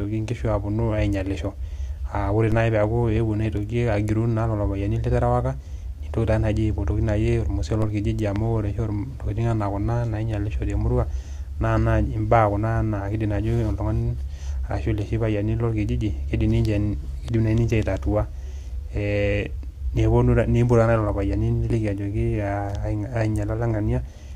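DC steps at 2.52 s and 7.82 s: the waveform's zero line jumps by about -19 dBFS, then drains away through a roughly 5 Hz high-pass, each giving a low thump under the speech. A loud pop follows at 8.36 to 8.38 s, a single sharp burst roughly 10 dB above the speech, likely from a sudden voltage spike such as a switch or static discharge.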